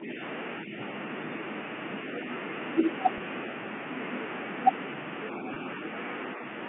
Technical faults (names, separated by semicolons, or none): speech suppressed in double talk; packet loss with pitch repetition